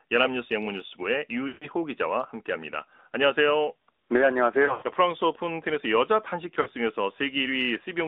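Throughout, the speech passes through the AMR narrowband mobile codec. The band runs only from about 250 Hz to 3.7 kHz, and the pulse-driven vocal tract model leaves a plainly buzzy, synthetic edge consistent with a mid-rate mode near 10 kbps.

Lost AMR speech frames occur three times. The decoder repeats the last good settings at falling gain to cover each gap. At 1.48 to 1.68 s, about 140 ms are lost, and the sound smears and fades. From 4.66 to 4.91 s, dropouts scattered over 160 ms, the longest run 100 ms, give a drawn-out, dying warble. At 6.62 to 6.68 s, a 40 ms gap produces a brief dip.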